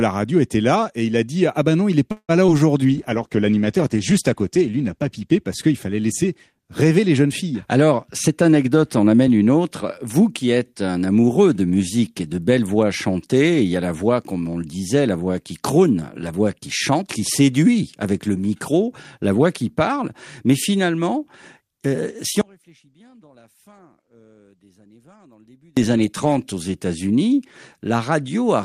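A French speech recording with three distinct faults. Right after "ben non il n'est", from 2.11 to 2.31 s, there is a call audio freeze: the sound stops advancing and the last fragment is stretched into a buzzy tail that decays, with about 70 ms of near-silence before the talk resumes exactly where it left off. Nothing is lost, but the 174 ms of filler pushes everything after it later. The likely cause is delayed packets starving the jitter buffer. On a spectrogram this shows as smeared, flattened harmonics fading into a dark strip. From 8.27 to 10.05 s, ending just before "qui êtes un amoureux", a jitter buffer speed-up makes the talker sound rushed. Delivery runs at about 109% of normal speed with unchanged pitch, because repeated pitch-period-sized slices were cut out to drain excess buffered audio, totalling roughly a fifth of a second. The waveform looks compressed in time, with tiny splice points between glottal cycles rather than any visible gap. 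Finally, after "euh si", from 22.41 to 25.77 s, one channel inverted means the two sides cancel when folded to mono, and that section falls by about 32 dB. The likely cause is reversed polarity on one leg of the stereo path. In stereo the two waveforms mirror each other, and a mono spectrogram shows the span nearly empty apart from faint residue.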